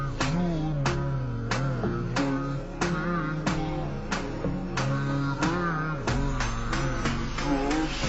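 From start to finish the audio shows a stereo-read-as-mono fault: interleaved left and right samples are consumed sequentially as one channel. Everything runs at 0.5x speed and sits 12 semitones, an octave, low, with a faint mirrored image folded into the upper spectrum.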